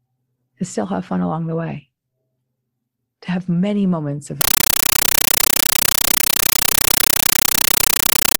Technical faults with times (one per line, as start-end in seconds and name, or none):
4.41-8.40 compressed stream played as audio